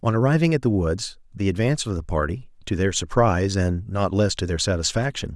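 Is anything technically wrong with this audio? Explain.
No, there are no technical faults.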